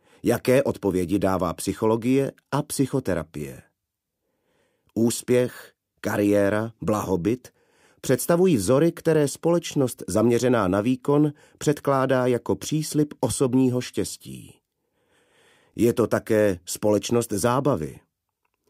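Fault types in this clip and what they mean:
overlapping chunks: A brief click or stutter lands at 3.70, 9.72 and 15.74 s, each time where 20 ms of audio plays twice. The sound was handled in 6-second chunks, each starting 20 ms before the previous one ended, so every join repeats that sliver.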